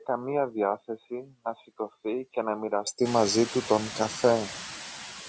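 From the start to 2.87 s the input was likely switched to a poorer device. That stretch passes a narrower band and sits a few decibels quieter, so the speech sounds dull and boxy. At 2.87 s it clears up abruptly, with no gap at the change.

Throughout the clip a noise suppressor lowers bands it takes for steady noise by about 4 dB, frame by frame. The residue pumps between and beneath the speech, and this grows more audible once the room noise rises around 3 s.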